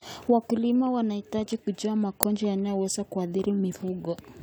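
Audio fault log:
2.23 s, uninitialised buffer: a block was played before any audio was written to it, releasing leftover memory as a sharp 1.45 ms crack just after "wanahitaji kujua". The length fits a 64-sample buffer.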